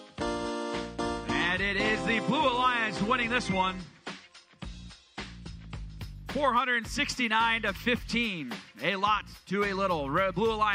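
The player opened the adaptive stream at a low bitrate to start quickly, then stepped up once it had measured the connection. From 0 to 6.0 s nothing is heard above 9.7 kHz and codec artefacts are stronger, which fits AAC near 32 kbit/s; the quality then improves suddenly, without a gap, consistent with about 96 kbit/s.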